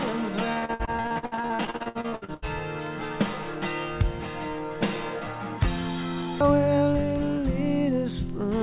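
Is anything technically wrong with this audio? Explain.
Yes. From 0.53 to 2.48 s there is repeated packet loss, which gives a robotic sound. Over this stretch the stream keeps losing packets, and each hole is covered by stretching the previous sound. The holes run up to 80 ms, and about half the span is patched this way. The result is choppy and robotic, with pieces missing. A single dropout would leave one clean gap, but here the fills recur rapidly, all within the call path's 4 kHz bandwidth.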